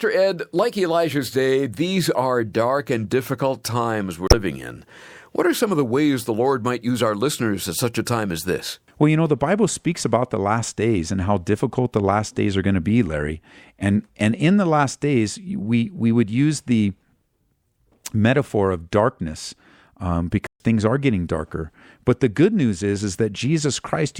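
A speech recording with two faults. At 4.27 to 4.34 s, damaged data in a compressed stream produces a brief disturbance lasting about 70 ms: the decoder misreads corrupted frames, loses sync and resumes at the next valid frame header. At 20.47 s the speech cuts to silence for about 134 ms. This is likely a playback stall, where the player ran short of data or its output thread was briefly blocked.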